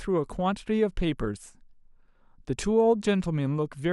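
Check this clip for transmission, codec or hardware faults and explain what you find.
Nothing here points to a transmission, codec or hardware problem; the speech comes across steadily with no dropouts, glitches or level jumps to report.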